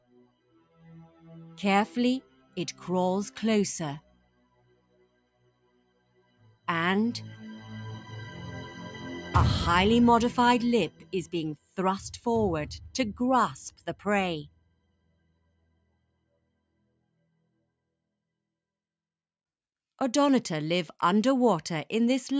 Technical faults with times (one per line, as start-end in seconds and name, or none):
0.00-22.40 noise suppressor applied to music or sounds
0.01-1.25 sound cut by the noise suppressor
2.22-2.57 sound cut by the noise suppressor
4.01-6.68 sound cut by the noise suppressor
10.90-11.78 sound cut by the noise suppressor
13.70-14.06 sound cut by the noise suppressor
14.44-17.67 sound cut by the noise suppressor